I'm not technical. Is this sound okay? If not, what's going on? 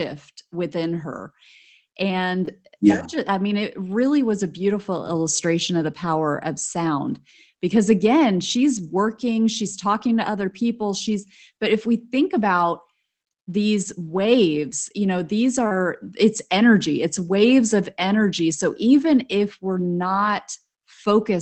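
No. Short concealed packet loss at 2.45 s and 15.67 to 15.73 s, between "waves you know these" and "it's energy it's waves": bits of the call arrived too late, so the receiver stretched the last sound to cover them, leaving a quick smear or wobble. A lost packet rebuilt from error correction at 2.47 s and 15.71 to 15.81 s: a rougher backup copy was played, so those moments sound briefly grittier.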